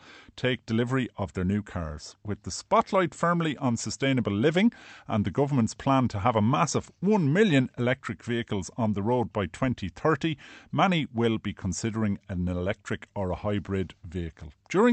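No technical faults can be heard anywhere in the recording. The speech has come through a WebRTC call path, and its high frequencies stop at 8 kHz, which points to an Opus codec running at about 48 kbps with its bandwidth set to that limit.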